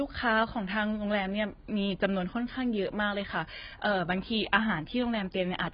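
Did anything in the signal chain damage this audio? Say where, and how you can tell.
Yes. Throughout, the speech is dull with nothing above 5 kHz, and sibilants warble and smear: likely heavy AAC compression at the codec stage, fitting a very low bitrate, near 16 kbps. A plain low-pass filter would sound clean, without this smearing.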